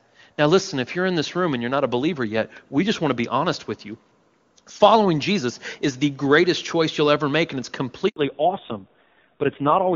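At 8.08 s, right after "ever make and it's", a handover gap opens. The call is passed between networks, and no speech frames arrive during the switch. The voice dies away within a few tens of milliseconds and stays silent for 80 ms. Whatever was said in that span is gone.

From 8.16 s to the end, the call shows a fallback to narrowband. Before the handover, the clear HD Voice band reaches up near 7 kHz. Afterwards, nothing above 4 kHz remains. The speech turns dull and rough, which points to a low-rate narrowband codec near 5.9 kbit/s.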